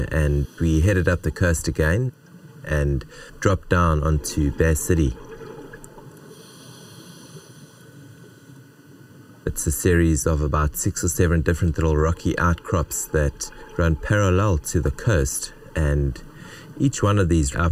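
Channel delay (comb filtering) throughout: a sub-millisecond channel lag cancels the mono sum near 700 Hz and evenly above, sounding hollow; spectrograms show fixed dark bands.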